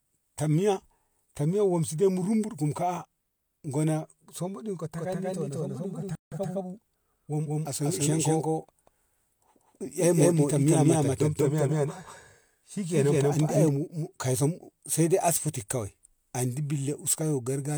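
From 4.98 s to 13.69 s the speech is heard twice: a second, full-band copy trails the first by about a fifth of a second, at roughly the same level, with no decay or room colour. It switches on and off abruptly at those two points. This is a doubled audio track, and the likely cause is the same signal reaching the mix twice, once through a slower path that holds it back by that fixed amount.

At 6.15 s, inside the doubled stretch, the audio cuts out mid-flow and stays silent for about 0.17 s before resuming at 6.32 s. That gap is a playback stall. The likely cause is the player running short of data or its thread being briefly blocked, leaving nothing to output until it recovered.

Straight after the gap, from 6.32 s to 7.42 s, the speech runs about 1.15 times faster than normal while keeping its usual pitch. This is time-compressed catch-up: the player shortens the backlog built up during the stall by removing small slices of audio and cross-fading across the joins, and then settles back to normal pace.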